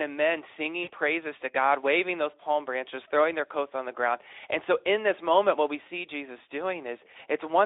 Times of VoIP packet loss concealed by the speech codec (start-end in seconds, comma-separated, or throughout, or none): 0.83-0.90